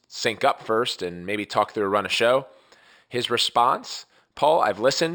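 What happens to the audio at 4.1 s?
Imaging from linear upsampling is present at 4.1 s, as it is through the whole clip. The sound points to a rate raised from 12 kHz to 44.1 kHz by joining samples with straight lines, a weak filter that lets mirror copies of the speech spectrum through between about 6 and 12 kHz, roughly 20 dB below the signal. The top of the band sounds dulled, and sibilants carry a light metallic shimmer.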